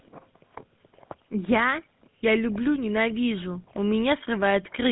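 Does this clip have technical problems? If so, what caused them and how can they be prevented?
Yes. A GSM full-rate codec gives the speech a plainly audible buzzy, gravelly roughness throughout, consistent with a 13 kbps stream whose coarse pulse excitation loses detail. A spectrogram shows energy only between 150 Hz and 3.6 kHz. Record locally or use a wideband codec instead.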